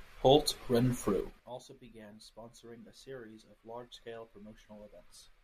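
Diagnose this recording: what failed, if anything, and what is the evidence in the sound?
Zipper noise from a gain stage in the processing chain, most plausibly applied once per buffer without smoothing. Between 1.12 and 1.58 s the speech drops by roughly 25 dB in 5 dB steps, around ten per second, and each jump leaves a small tick, giving a zipping texture. On the waveform the envelope descends as a staircase; the spectrogram shows faint broadband vertical lines at each step, where the gain discontinuity spreads energy across frequencies.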